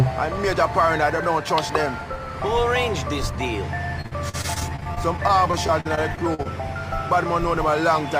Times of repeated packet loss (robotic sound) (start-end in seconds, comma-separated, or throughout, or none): 4.01-6.47